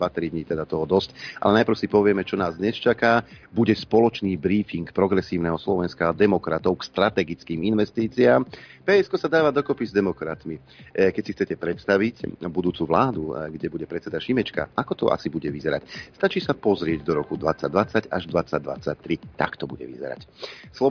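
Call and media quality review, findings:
No call or media quality faults found in this review.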